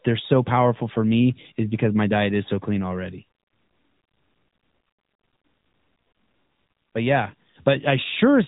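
Throughout, the speech carries AMR narrowband mobile codec damage: nothing above 3.8 kHz, plus a buzzy, synthetic edge that a plain low-pass filter wouldn't add, consistent with a high-rate mode near 10.2 kbps.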